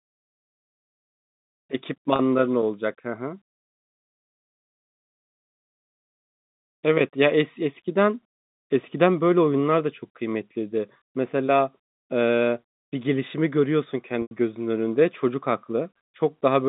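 Speech over a telephone line, with G.711 coding holding the band to roughly 150 Hz to 3.7 kHz, hit by packet loss with pitch repetition twice: a 30 ms gap at 2.16 s sounds like a briefly held buzz, and a longer 90 ms gap from 14.22 to 14.31 s fades toward silence before the speech cross-fades back in.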